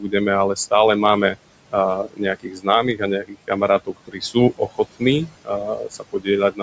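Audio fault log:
Throughout, noise suppressor artifacts: the room noise, which sits about 16 dB below the speech, dips away in the pauses and swells back beneath the talking. The suppressor estimates which frequency bands hold steady noise and pulls them down frame by frame, by about 21 dB here, so the background pumps with the speech instead of staying constant.
0.00–0.14 s, 2.04–3.03 s, 3.21–4.36 s, 4.57–5.02 s, 5.26–6.28 s and 6.51–6.61 s, speech cut by the noise suppressor: parts of the speech turn faint or swallowed, as if quiet sounds and word tails were clipped short. In these stretches the suppressor mistook low-level speech for noise and turned it down with the background, by about 10 dB at the start and about 17 to 21 dB in the later spans. Within most ranges only a fraction is affected, roughly half a second in the longer ones.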